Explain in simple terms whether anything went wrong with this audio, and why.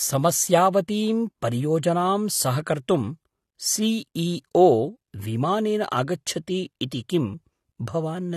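The speech sounds dull and smeared from start to finish, with nothing above about 12.5 kHz. Hissy sounds turn fizzy and warbly. The likely cause is heavy AAC compression, which saves space by discarding high sounds and fine detail.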